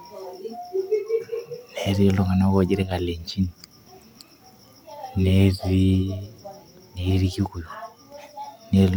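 One channel drops out at 2.83–2.91 s: the speech dips abruptly by about 6 dB, likely because one stereo side went silent before the mono sum.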